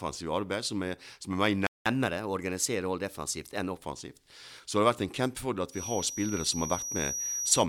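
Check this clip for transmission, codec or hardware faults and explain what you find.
Three faults are audible: a playback stall, a catch-up at higher speed that follows it, and a feedback whistle near the end.

At 1.67 s the speech cuts out mid-flow and the output stays silent until 1.86 s, a gap of about 0.19 s. This is a playback stall. The player most likely ran short of buffered data, or its output thread was held up, so nothing reached the output until it recovered. It then resumes.

From 1.86 s to 3.77 s the speech runs fast, at 1.1 times normal speed, and its pitch is raised by roughly one and a half semitones. This is catch-up at higher speed. To recover the time lost in the stall, the player resamples its backlog and plays it faster, which lifts tempo and pitch together. Once the backlog is cleared, both return to normal.

From 5.68 s, right after "har vært en kjempefordel", to the end of the clip, a thin, steady tone at 5.8 kHz sits behind the speech, a few decibels below it, swelling and fading slowly in level. 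This is a feedback whistle. The cause is likely a loudspeaker-to-microphone loop running right at the edge of instability, so that one frequency keeps ringing without building into a full howl.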